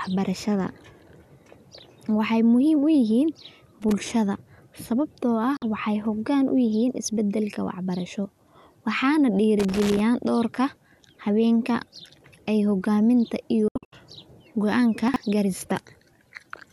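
From 3.82 to 3.92 s, and again from 9.60 to 10.00 s just before "dhowrka hawenka", there is loose connector crackle. A dirty contact is making and breaking, chopping the speech into irregular scratchy bursts. On a waveform these appear as ragged spikes, and on a spectrogram as broadband vertical streaks.

At 5.57 to 5.62 s, between "sababto ah" and "waxay hogan u", a digital broadcast dropout mutes 48 ms of audio, which fits about two lost frames, behind a 3 ms fade. A second dropout follows "ay hogaminta" from 13.68 to 13.93 s. There, 192 ms goes missing as several holes spread over 240 ms, and the longest gap is 72 ms. Each hole is a flat, blank gap in both the waveform and the spectrogram.

At 15.08 to 15.16 s, chunks out of order produce a brief jumbled moment. A 20 ms chunk plays three chunks late. The spectrogram shows discontinuous harmonic tracks at the three hard joins.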